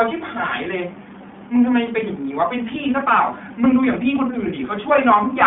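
Right through the clip the speech carries iLBC codec damage, and it's plainly audible: a rough, slightly synthetic grain from frames coded independently, which fits 20 ms frames at 15.2 kbps. It's narrowband too, roughly 150 Hz to 3.5 kHz, with nothing above 3.7 kHz.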